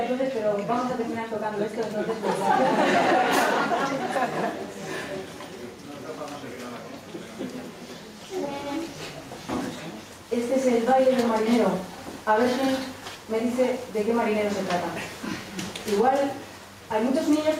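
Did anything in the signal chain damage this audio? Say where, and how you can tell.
Yes. Gain pumping runs through the whole clip. The level is pulled down under each loud sound and recovers afterwards, a swing of about 10 dB. Loud and soft passages sit close together, so the sound is squashed and breathing. The likely cause is input gain set far too high at the analogue preamp stage, with a fast limiter or compressor further on pulling the level down on each peak and releasing it afterwards.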